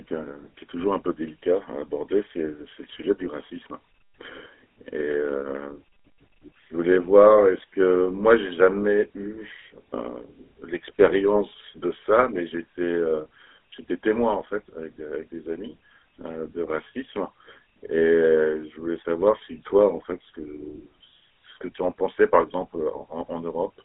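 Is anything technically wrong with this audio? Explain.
Yes. Throughout the speech, the GSM full-rate codec leaves a buzzy, gravelly roughness, consistent with a 13 kbps codec. It rebuilds the voice from a vocal-tract filter driven by a regular pulse train. On a spectrogram, energy sits only between 300 Hz and 3.5 kHz, with smeared, coarse harmonics.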